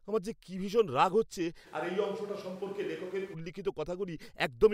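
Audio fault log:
1.68–3.33 s, switch to a distant microphone: after "কি ভীষণ রাগ হচ্ছে", likely a farther mic replaces the close one, so speech turns abruptly roomy, thinner, about 5 dB quieter, noisier.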